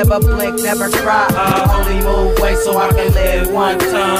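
From 1.86 s to 2.93 s there are CD scratch ticks: five short clicks at a steady rate of roughly five per second, each lasting at most a couple of milliseconds. A blemish on the disc surface passes the laser once per revolution and corrupts more data than error correction can restore, so the player conceals the damage by patching or muting those samples. On a spectrogram each tick is a thin vertical line spanning the full frequency range. The waveform shows brief notches or flattened spots at evenly spaced intervals.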